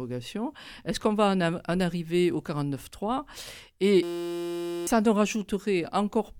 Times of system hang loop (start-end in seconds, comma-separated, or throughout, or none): 4.03-4.87